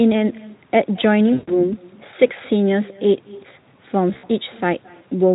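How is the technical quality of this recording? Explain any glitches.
The recording has two clear problems: a constant echo and two short dropouts.

The echo with no canceller runs through the whole clip. The far end plays the call over a loudspeaker. Its microphone catches that sound and sends it back, and nothing strips it out. So every phrase returns after the network round trip, roughly a fifth of a second later. The copy sits about 22 dB below the main speech. It sounds faint and thin, like a shadow trailing each syllable.

VoIP packet loss concealed by the speech codec hits twice. The first loss runs from 1.33 to 1.71 s and covers 140 ms of missing audio, which fits about seven lost 20 ms frames. The second falls between 4.13 and 4.31 s. There 100 ms is missing, scattered over 160 ms, with the longest gap 60 ms. In both places the decoder keeps extending the last pitch and spectral shape while turning the gain down. 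The speech smears into a stretched, fading sound. It stays weak and distorted for a moment after real packets resume, because each rebuilt frame feeds the next. The light Speex coloring is present on the speech.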